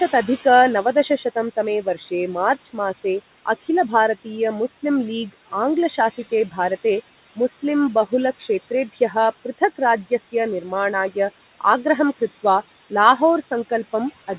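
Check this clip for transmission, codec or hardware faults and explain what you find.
The faults here come from the noise suppressor rather than from the transmission link or hardware. The audio stops at 4 kHz, consistent with a narrowband telephone codec such as G.711, and room noise sits about 17 dB under the speech.

Noise suppressor artifacts run through the whole clip. The suppressor estimates the steady background and attenuates those bands frame by frame, by about 14 dB here. As a result the noise floor sinks in gaps and swells under speech.

Speech cut by the noise suppressor occurs at 0.84–3.05 s, 5.90–6.58 s, 7.36–7.61 s, 8.93–9.15 s, 9.58–10.72 s, and 12.90–13.71 s, just after "आग्रहं कृत्वा". Quiet speech energy was misjudged as noise and pulled down by about 10–17 dB. In each window brief fragments, from about a tenth of a second to about half a second, sound swallowed or faint.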